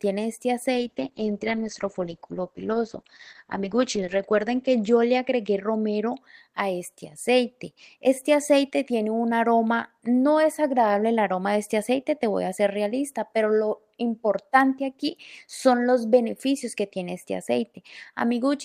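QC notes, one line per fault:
0.74–6.29 s, call bitrate drop: the encoder's bit budget collapses, consistent with a fall from around 32 kbps to about 9 kbps, and the sound turns coarse and watery, bottoming out for roughly 3.5 s. At that rate the codec also narrows its audio band, so the top end vanishes. On a spectrogram, energy above 8 kHz is cleanly sliced off where content previously reached 20 kHz, with smeared, blocky texture below. The waveform's envelope stays largely unchanged.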